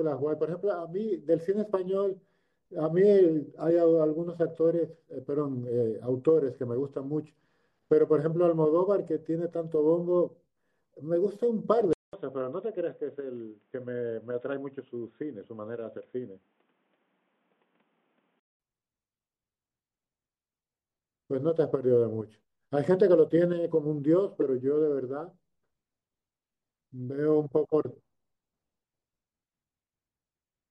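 Throughout the speech there is a watery, swirling quality, with metallic chirps on s sounds and blurred consonant onsets. This is likely MP3 compression at a bitrate that fits about 64 kbps. Starved of bits, the encoder zeroes weak frequency lines that flicker between frames. On top of a fixed treble cutoff, these flickering lines make the sound shimmer.

From 11.93 to 18.60 s the sound turns dull and boxy, with nothing above 3.8 kHz, a little lower in level, and with a faint new noise floor well below the speech. A 200 ms silence marks the switch, likely the input switched to a poorer device. The gap and the change in tone and noise set it apart from a mere filter.

At 24.41 to 24.43 s a single short blip of spurious energy breaks through, peaking at around -15 dBFS, lasting about one frame. This is a corrupt frame decoded: flipped bits made the decoder misplace energy in frequency.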